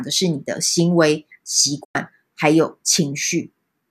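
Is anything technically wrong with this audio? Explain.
Yes. From 1.84 to 1.95 s the speech drops out in a digital broadcast dropout: the receiver stopped getting usable frames and muted, fading down over about 8 ms, until valid data resumed. Roughly 96 ms of programme is simply gone, which fits four lost frames, so after the silent gap the speech resumes further on rather than where it stopped. On a waveform this appears as a short taper to a flat line. On a spectrogram it is a clean, full-band blank column.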